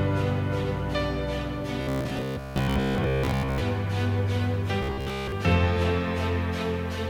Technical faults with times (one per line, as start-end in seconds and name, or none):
1.81-3.61 robotic sound from repeated short buffers
4.83-5.32 robotic sound from repeated short buffers